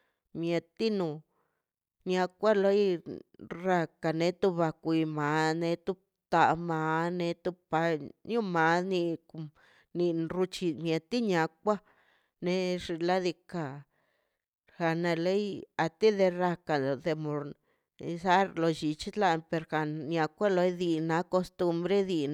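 No technical faults are audible.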